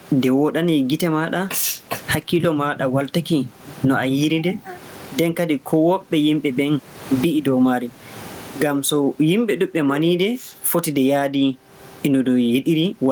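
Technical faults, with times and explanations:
Throughout, gain pumping: the gain swings by around 20 dB, likely mic gain set far too high with a fast limiter.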